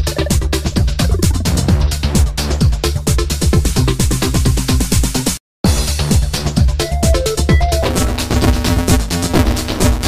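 Buffer tearing runs from 7.83 s to the end at 10.08 s as a robotic buzz at 172 Hz, which fits a 256-sample buffer. Writer and reader positions have slipped, so about half of each period replays audio from roughly 20 ms earlier, with hard joins.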